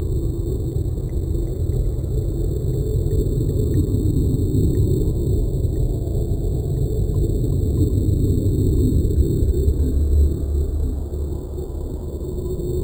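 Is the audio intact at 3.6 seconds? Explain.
No. At 3.6 seconds, as throughout the clip, there is imaging from sample-and-hold upsampling: each sample was repeated to reach 48 kHz from 8 kHz without smoothing, leaving mirrored spectra from 4 to 8 kHz, about 30 dB down, heard as a metallic fizz tracking the sound.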